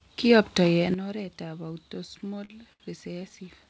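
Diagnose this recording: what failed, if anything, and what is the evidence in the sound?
At 0.94 s the speech and background noise drop together by about 11 dB and stay down; likely a digital gain step applied without a ramp, a sudden gain jump.

Between 2.18 and 2.83 s the speech drags and stutters through five short stalls, the longest 69 ms. These are repeated stalls (stutter): late packets drained the jitter buffer, and concealment stretched the sound without losing anything.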